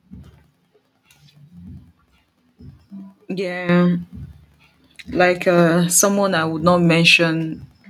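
A speech recording in which the microphone volume is stepped up three times: by about 10 dB at 3.69 s, about 4 dB at 6.6 s and about 3 dB at 7.62 s. Each jump is instantaneous, and the background noise rises with the voice, pointing to the call software raising the device's input volume rather than the talker moving closer. A smooth automatic gain ramp would instead change the level gradually, not in sudden steps.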